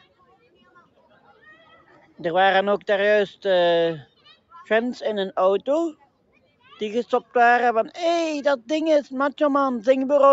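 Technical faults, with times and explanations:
0.01–1.43 s and 1.63–2.19 s, sound cut by the noise suppressor: the suppressor mistook wanted sound for background noise and pulled it down by as much as about 11 dB, so the level sinks and tails are clipped short for roughly a second, then half a second.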